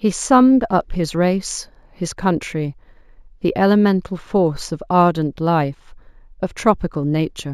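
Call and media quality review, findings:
Imaging from linear upsampling, throughout. Dulled top end, faint metallic shimmer on sibilants. Mirror images sit at 8 to 16 kHz, roughly 25 dB down. Fits a 16 kHz source raised to 44.1 kHz by straight-line interpolation, a weak anti-imaging filter.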